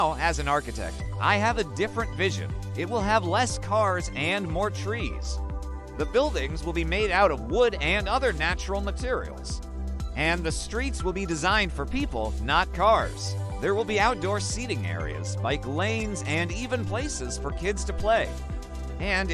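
Nothing here stands out as a technical fault; the audio just runs along steadily with no glitches, gaps or odd jumps to point to at any moment.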